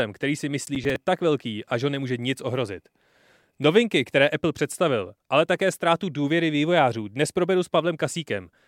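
From 0.67 to 0.96 s, after "který si" and before "tak velký a že", a burst of processor overload crackle tears across the speech. The processor missed a handful of buffer deadlines in quick succession, and each miss replayed a scrap of old audio with hard edges, spacing that fits buffers of around 10 ms. It sounds gritty and ragged. On a waveform, short repeated segments meet at abrupt steps; a spectrogram shows thin vertical broadband streaks clustered in that stretch.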